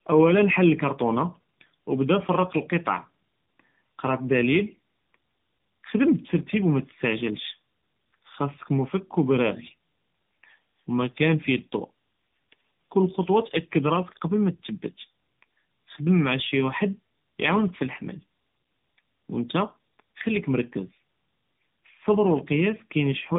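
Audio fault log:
Throughout: tandem speech coding. The call passed through a chain of codecs, AMR-NB at 7.95 kbit/s, then G.711 mu-law at 64 kbit/s, then AMR-NB at 12.2 kbit/s. At each border it was decoded and coded again, so two low-rate speech coders worked in a row, the second one refitting its model to the first one's flaws. The speech sounds rougher, muffled and warbly, with nothing above about 3.8 kHz.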